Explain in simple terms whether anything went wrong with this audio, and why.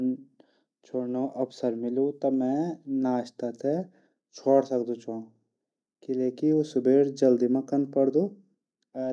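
Nothing went wrong here: listening to this speech recording, there's no glitch, dropout or other technical problem to point to anywhere in it.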